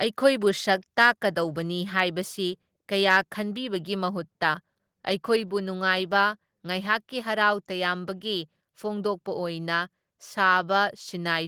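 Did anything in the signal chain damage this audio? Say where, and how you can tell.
Yes. At 1.02 s and again at 5.4 s, speech and background both drop suddenly by about 2 dB in one step. That points to call processing, likely a microphone volume stepped down by the software trimming the device's input level.

From 3.09 to 3.17 s, the loudest stretch turns harsh and crackly, with flattened peaks pushing about 3 dB past full scale on a small share of samples. That's likely microphone overload at the converter: input gain set too high, so the waveform tops got sheared off.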